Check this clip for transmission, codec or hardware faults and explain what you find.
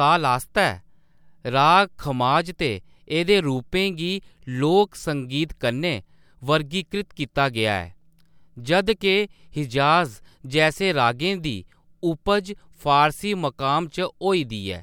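No faults detected in this recording.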